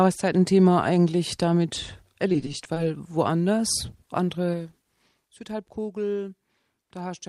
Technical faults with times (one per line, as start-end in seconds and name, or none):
2.28-2.77 repeated packet loss (robotic sound)